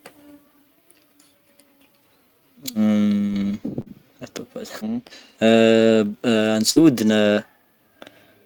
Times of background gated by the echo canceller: none

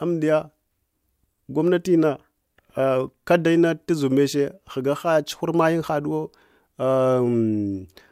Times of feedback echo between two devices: none

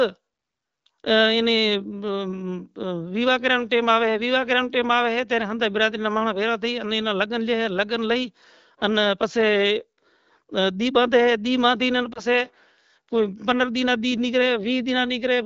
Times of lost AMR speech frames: 12.13-12.21

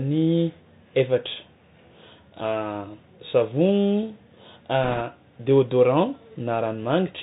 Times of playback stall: none

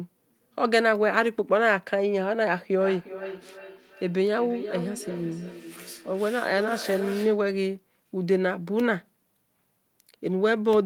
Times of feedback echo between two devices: 2.81-7.48

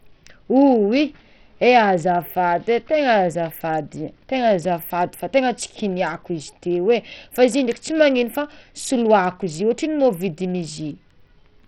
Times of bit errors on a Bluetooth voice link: none

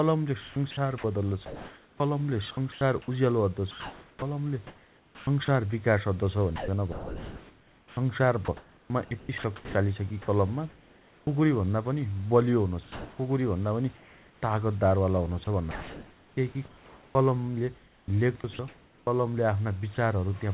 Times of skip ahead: none

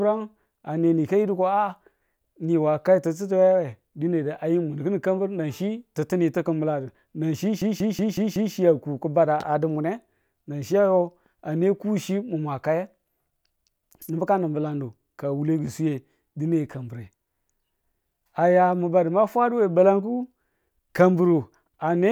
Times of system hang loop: 7.62-8.54

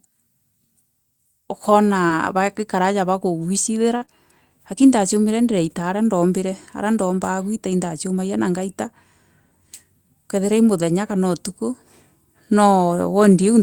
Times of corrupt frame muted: none

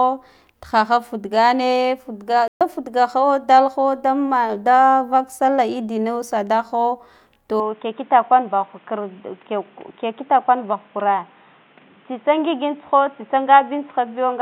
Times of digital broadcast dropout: 2.48-2.61

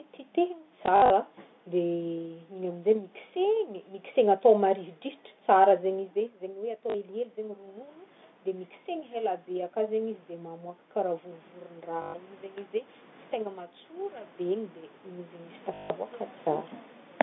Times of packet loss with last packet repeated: 0.86-1.10, 6.90-6.94, 12.02-12.14, 15.74-15.90

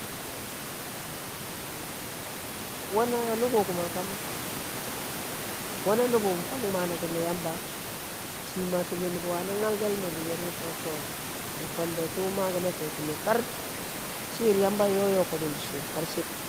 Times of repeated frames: none

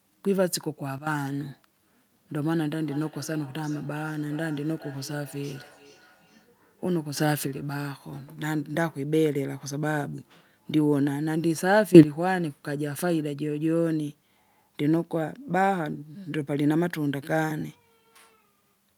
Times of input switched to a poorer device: none

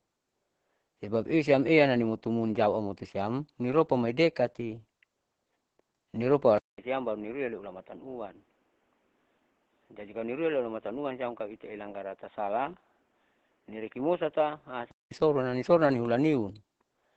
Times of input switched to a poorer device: 6.58-15.11

